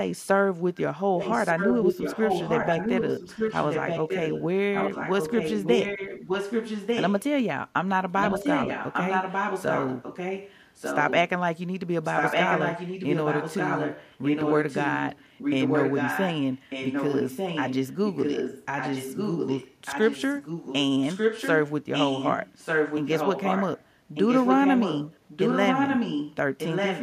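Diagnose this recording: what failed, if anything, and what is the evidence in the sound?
Echo leak in call processing: a copy of the speech trails by 1.2 s, about 5 dB down at 1.18–4.45, 4.73–7.23, 8.18–11.19, 12.03–20.75 and 26.58–27.02 s, and near equal level at 21.01–21.7, 21.92–23.85 and 24.14–26.36 s. Likely a far-end loudspeaker echo canceller passing its microphone pickup back.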